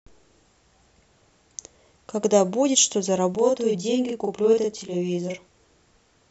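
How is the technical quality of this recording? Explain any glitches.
The recording has one clear glitch. From 3.35 to 5.38 s, a channel delay (doubling) makes one channel arrive 40 ms late. Mixed to mono, the speech sounds doubled at equal level, unlike a decaying room echo.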